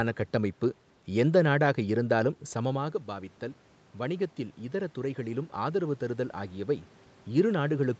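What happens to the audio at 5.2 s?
At 5.2 s the automatic gain is rising, a climb that runs from about 3.96 s to 6.91 s. The input level had fallen by about 10 dB, so the automatic gain control judged it too quiet and stepped its gain up gradually, by about 5 dB over those three seconds. Because the gain acts on the whole signal, the voice and the room noise behind it swell together rather than the voice alone getting louder.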